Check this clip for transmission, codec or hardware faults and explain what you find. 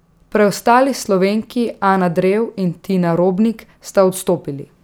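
No transmission or hardware faults.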